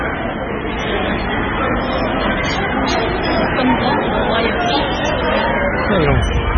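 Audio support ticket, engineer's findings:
Heavy watery, swirling texture across the whole clip; treble absent, transients smeared, metallic chirps on bright content. Likely MP3 compression, consistent with a very low bitrate around 16 kbps. Encoder starved of bits, so it zeroes weak frequency lines that flicker between frames and band-limits at 9 kHz. Spectrogram: hard horizontal ceiling at 9 kHz, patchy on/off blocks below it. Waveform: attacks blurred, with pre-echo ahead of sharp onsets.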